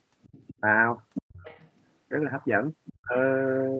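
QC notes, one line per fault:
0.22–0.54 s, 1.14–1.83 s and 2.85–2.93 s, other side's voice leaking through: a faint second voice sits under the talker, roughly 25, 15 and 20 dB down, loudest in the middle stretch. This is likely loudspeaker playback reaching the microphone that the echo canceller left partly uncancelled.
3.0–3.16 s, speech suppressed in double talk: the talker's level collapses by around 40 dB for roughly 150 ms, chopping that stretch out. The likely cause is the echo canceller failing to separate near speech from echo while both sides overlapped, and attenuating everything.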